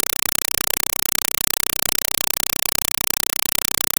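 Speech is replaced throughout by loud chattering static, a compressed stream played as audio. An undecoded AC-3 bitstream, fitting 192 kbps, gives 4 ms noise bursts 31.25 times a second.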